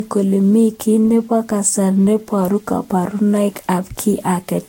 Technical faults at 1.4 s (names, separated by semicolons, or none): generation loss